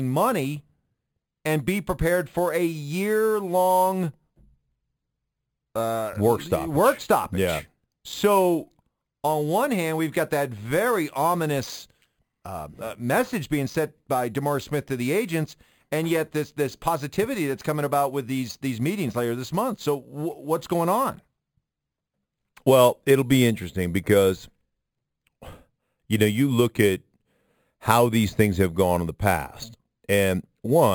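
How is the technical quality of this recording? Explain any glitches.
The recording has one fault: imaging from sample-and-hold upsampling throughout the speech. The audio was raised from 11 kHz to 48 kHz by simply repeating each sample, with no smoothing filter. Mirrored copies of the spectrum therefore sit above the original band, the first spanning roughly 5.5 kHz to 11 kHz at about 19 dB below the signal. This is heard as a bright metallic fizz that tracks the speech. On a spectrogram, faint inverted reflections of the speech harmonics appear above 5.5 kHz, and the waveform shows small staircase steps.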